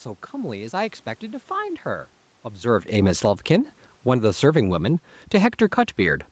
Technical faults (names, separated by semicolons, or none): automatic gain falling